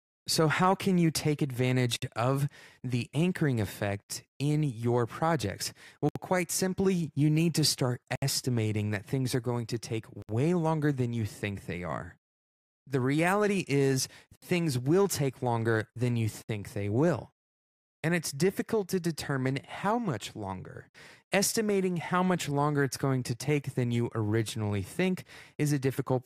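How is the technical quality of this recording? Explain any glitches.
Speech is cut by recurring short dropouts, each a gap at a join of encoded pieces. They occur at 1.96, 4.02, 6.09, 8.16, 10.22, 14.36 and 16.42 s, each lasting 62 to 67 ms. Separately encoded segments, spaced about 2 s apart, were joined untrimmed, so encoder start delay and last-frame padding remain. Each join opens a brief silence with smeared edges. Speech then resumes where it stopped, as with "things will take longer".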